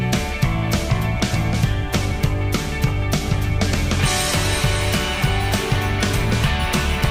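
No technical faults occur at any point in this audio.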